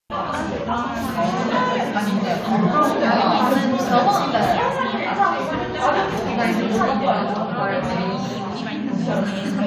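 The sound recording has no technical fault anywhere in its signal path.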